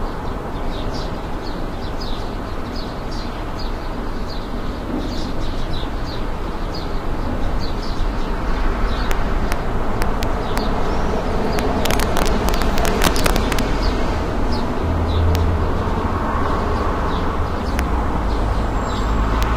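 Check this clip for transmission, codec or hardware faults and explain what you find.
The clip has an integer overflow fault. Loud peaks wrap around, producing sharp cracks at 9.11 s, 9.52 s, 15.35 s, 17.79 s and 19.43 s, and denser bursts from 10.02 to 10.58 s and from 11.59 to 13.59 s. The worst is that last stretch, pushed about 4 dB over the limit. Elsewhere the excess is between about 0 and 2 dB. Whenever the signal exceeds the largest integer, it flips to the opposite extreme instead of being limited. The result is a violent crack, harsher than clipping. On a waveform, the peaks jump from one rail to the other. On a spectrogram, they appear as bright full-bandwidth vertical lines.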